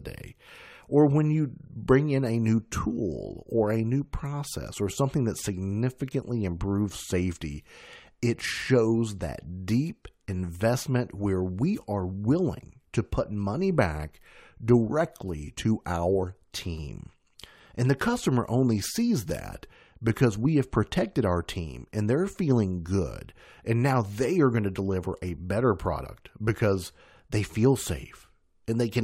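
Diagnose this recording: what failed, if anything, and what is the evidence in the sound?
The failure is at the codec stage: compressed frames skipped. Whole frames were either missing from the stream or rejected by the decoder as damaged, so playback jumped forward. Between 26.02 and 26.06 s, right after "to deliver a better" and before "because they feel", roughly 70 ms of speech vanishes.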